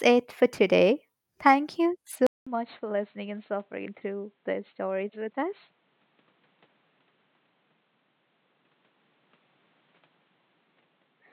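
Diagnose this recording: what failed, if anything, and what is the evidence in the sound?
At 2.27 s the speech cuts out for 200 ms, then returns about 10 dB quieter, with nothing above 4.3 kHz and a new, faint noise floor through to the end. This is likely an input switched to a poorer device at the driver stage. A codec or filter change wouldn't also shift level and noise after a gap.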